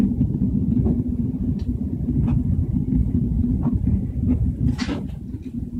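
No technical faults can be heard anywhere in this clip.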